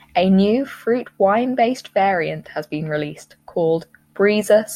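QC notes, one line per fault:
No faults heard in this speech recording.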